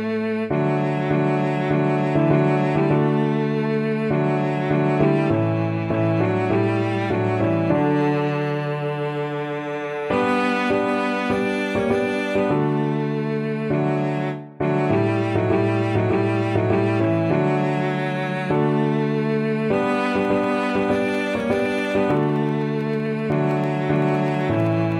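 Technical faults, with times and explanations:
20.06–24.92 s: periodic USB or driver dropouts. Tiny slivers, about a tenth of a millisecond, are skipped every 64 ms. This gives evenly spaced ticks.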